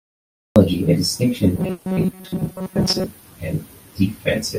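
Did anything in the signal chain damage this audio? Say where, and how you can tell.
Yes, three separate problems, and they stack up in the middle of the clip.

Cut-off start: the file sits in digital silence from 0 to 0.56 s, then the speech jumps in mid-sound at 0.56 s with no attack or fade. That's capture or storage starting late, so the opening of that sound simply never got recorded.

Robotic sound from repeated short buffers: from 1.56 to 3.07 s the speech turns into a stiff, metallic buzz locked at 188 Hz, still loosely tracking the speech. Most likely a driver or buffer stage starving and looping roughly 5 ms chunks, which would repeat at that rate, for most of the stretch.

Burst of packet loss: inside that stretch, from 1.71 to 1.87 s, there's a 140 ms hole patched over. It sounds like the last sound held and fading rather than going silent. That's the network side: the receiver papered over the gap, and 140 ms of speech is gone.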